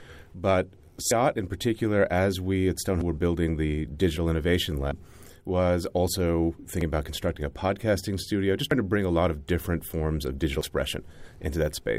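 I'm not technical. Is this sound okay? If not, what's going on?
No. The recording was likely made in pieces, losing a sliver each time one ended and the next began, which is audio missing between chunks. The speech skips about a tenth of a second at 1.11, 3.01, 4.91, 6.81, 8.71 and 10.61 seconds.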